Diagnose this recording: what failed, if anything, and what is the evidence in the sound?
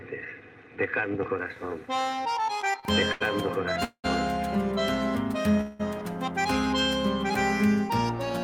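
Network jitter repeatedly drained the jitter buffer, causing repeated stalls (stutter) from 2.61 to 3.22 s. Four short gaps, the longest 78 ms, were bridged by continued sound.

A call audio freeze, likely from packets delayed in the network, halts the audio at 3.84–4.06 s and 5.61–5.81 s. The held sound fades, briefly reaching silence in the first.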